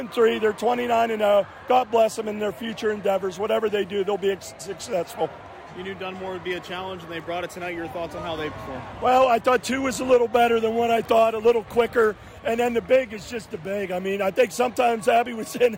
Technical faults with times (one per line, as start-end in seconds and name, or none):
1.71-2.02 hard clipping
9.08-9.56 hard clipping
10.12-10.44 hard clipping
11.12-12.01 hard clipping
12.93-12.96 hard clipping
14.40-15.17 hard clipping